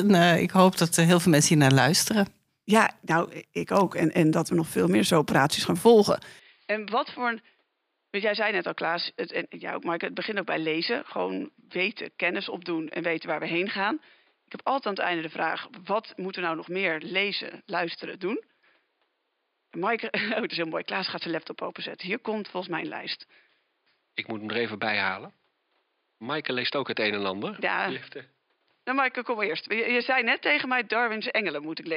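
Speech that changes character abruptly at 6.39 s and stays that way to the end. Nothing above 5 kHz survives, the level drops by roughly 10 dB, and a faint new background hiss appears well below the speech. Because the band, level and noise floor all shift together at one instant, with no gap, this is most likely an input switched to a poorer device rather than a filter or gain change, which would leave the original noise untouched.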